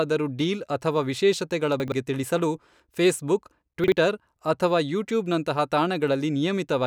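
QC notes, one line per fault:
1.80–1.92 s, chunks out of order: just after "ಡೀಲ್ ಅಥವಾ ವಿಶೇಷತೆಗಳ", a 40 ms chunk plays two chunks late, jumbling the speech with three hard joins. Nothing goes missing, unlike a dropout.
3.84–3.92 s, chunks out of order: after "ತಿಳಿಸಲು ಫೇಸ್ಬುಕ್", a 40 ms chunk arrives one chunk late, causing a brief scramble. There is no silent gap or repeated fragment, unlike a dropout or stutter.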